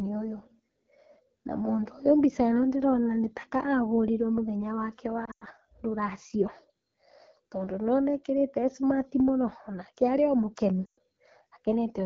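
Speech, carried throughout by the AMR wideband (HD Voice) codec. The sound is plainly rough and raspy. That points to one of the lowest rates, around 8.85 kbit/s, where the pulse-driven vocal tract model runs short of detail. Lost AMR speech frames break the speech twice. From 5.25 to 5.44 s, about 120 ms of frames go missing in patches, with the longest gap 100 ms. Then 10.86 to 10.99 s loses about 120 ms. Each time the decoder repeats its last pitch and tract settings at falling gain. The sound drops to near silence within two frames, then returns weak or rough for a moment.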